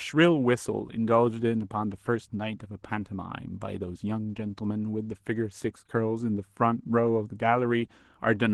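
Speech, with Opus voice compression audible from start to finish. The voice comes through hoarse and slightly robotic, the way it does when the excitation is coded coarsely. The top end is still present, which fits Opus in hybrid mode: SILK's linear prediction handles everything up to 8 kHz and a CELT layer covers the highs above that. The amount of damage points to a low bitrate, around 16 kbps.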